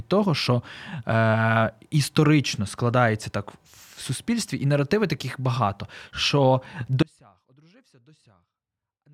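At 7.03 s, right after "наративи таких багато що", the speech drops out abruptly to a faint residue and stays there to the end. What's left is a faint leak roughly 35 dB down. That's likely a signal loss upstream while the path after the break stayed live.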